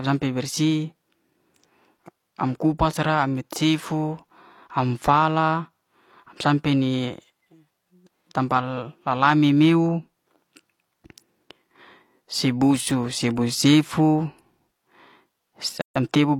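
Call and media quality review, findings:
Gap at a join of encoded pieces, 15.81–15.96 s: 143 ms silence mid-speech, which resumes where it stopped. Waveform: flat span, abrupt, smeared edges. Spectrogram: full-band blank column. Segments encoded separately, joined untrimmed; encoder delay and last-frame padding retained.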